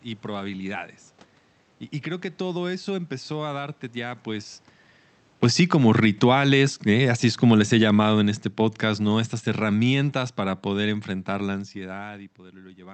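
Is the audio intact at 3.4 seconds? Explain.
Yes, the speech at 3.4 seconds is intact, with no fault at that moment beyond the room noise and the ordinary coding of the call path.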